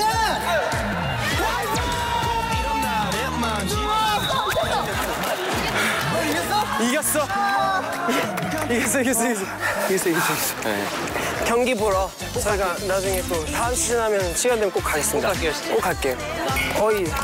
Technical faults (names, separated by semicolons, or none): none